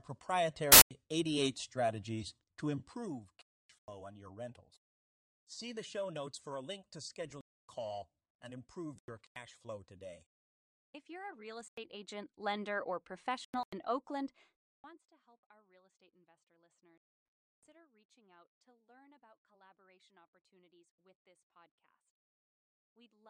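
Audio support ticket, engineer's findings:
Corrupt frame muted, eight hard dropouts in speech: 0.72–0.91 s, 3.42–3.93 s, 7.29–7.74 s after "for a link to", 8.97–9.36 s, 11.61–11.78 s, 13.45–13.73 s, 14.61–14.84 s before "to help our real", and 16.98–17.72 s between "our real estate investor" and "reaching out to learn". Decoder rejected bit-damaged frames; player substituted silence, timing intact. Gaps 0.17–0.74 s, consistent with whole frames. Waveform shows flat silent blocks with abrupt edges. Spectrogram shows full-band vertical black bars.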